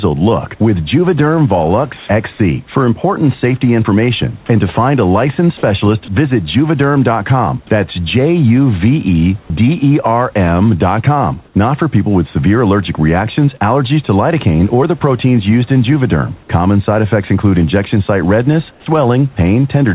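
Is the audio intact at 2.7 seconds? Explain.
No: at 2.72–2.75 s the speech briefly turns to steady noise, likely sound dropped by the voice detector, which stopped sending and left comfort noise instead.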